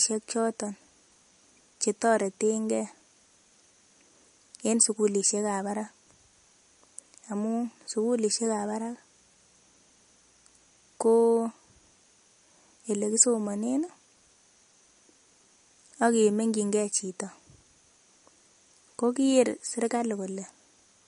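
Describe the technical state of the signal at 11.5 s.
At 11.5 s you're hearing the same MP3 compression damage that runs through the whole clip: nothing above 10.6 kHz, and a watery, swirly edge on the speech as weak frequency lines flicker between frames. It's likely a starved encoder, which fits a low bitrate around 40 kbps.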